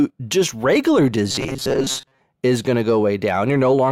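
A speech clip in which, from 1.31 to 2.21 s, between "just regular" and "is going to go", the voice collapses into a rigid metallic buzz near 133 Hz, robotic sound from repeated short buffers, likely audio arriving too seldom so a roughly 7.5 ms slice repeats over most of that stretch.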